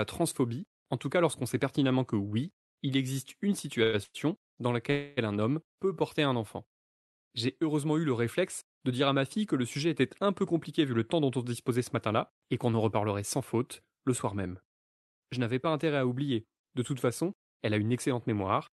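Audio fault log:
3.83–3.95 s, short stall from a late packet: one sound is held for about 100 ms while the empty jitter buffer waits, giving a slight buzz or dip before playback resumes with nothing lost.
4.03–4.16 s and 4.90–5.19 s, call audio freeze: the audio stops advancing for 112 ms and then 266 ms. The last sound continues as a fading buzz or hiss, ending in 30 ms of silence in the first freeze. This is likely caused by packets held up in transit. The audio then resumes where it stopped.
10.69–13.93 s, jitter buffer speed-up: the speech runs about 8% fast at unchanged pitch and sounds hurried. Short pitch-period pieces are repeatedly cut, totalling roughly 0.3 s, to shed the built-up delay.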